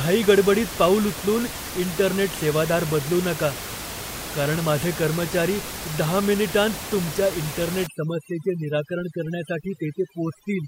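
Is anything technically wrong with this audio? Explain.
Yes. From 7.87 s to the end of the clip there is overdone noise removal. A noise reduction stage is working far too aggressively here. It compares each frequency band against its picture of the noise and pulls any band that looks similar sharply down or out. Quieter parts of the speech get caught and removed too. The room noise, which sits about 10 dB below the speech before this point, collapses into near silence with small twinkling specks.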